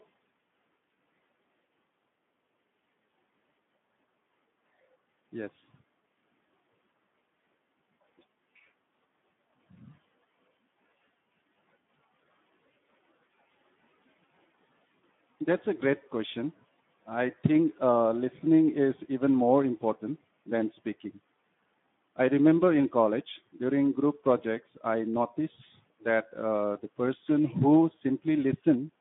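From start to finish the speech sounds hoarse, grainy and muffled, capped near 3.8 kHz. That is Speex codec damage: too few bits for the excitation, consistent with roughly 11 kbps.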